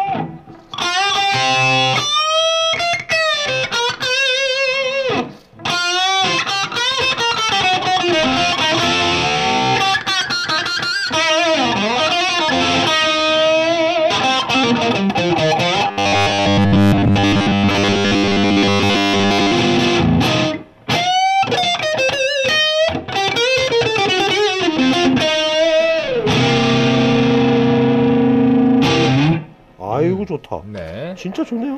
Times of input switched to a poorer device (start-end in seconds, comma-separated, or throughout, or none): none